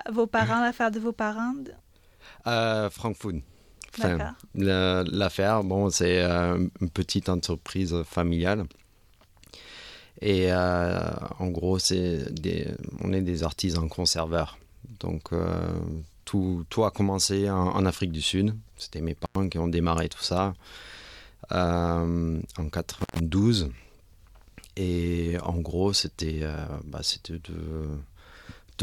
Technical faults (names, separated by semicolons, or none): intermittent contact